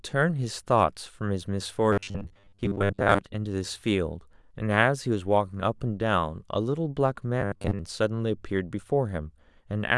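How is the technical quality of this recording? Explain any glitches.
The speech has two glitches, both robotic sound from repeated short buffers. From 1.93 to 3.20 s and again from 7.41 to 7.79 s, the voice becomes a metallic buzz at 100 Hz. The likely cause is audio arriving too seldom, so a roughly 10 ms snippet is replayed in place of most of the real signal.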